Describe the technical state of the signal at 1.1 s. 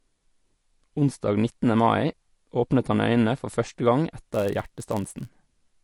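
At 1.1 s the speech carries the same damage it has from start to finish: plainly audible MP3 compression, most likely from a starved encoder, which fits a low bitrate around 48 kbps. With so few bits, the encoder is dropping quieter frequency lines frame by frame. That gives the speech a watery, swirly texture, and chirpy, metallic edges on s sounds, with consonant attacks smeared.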